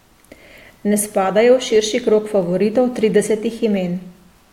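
From 0.42 s to about 4.4 s, a click recurs roughly every 0.67 s, around seven in all, each a slip of a handful of samples. Two clocks disagreeing by a few hundred parts per million likely cause these clock drift buffer slips. Unlike random dropouts, they arrive at an unvarying interval.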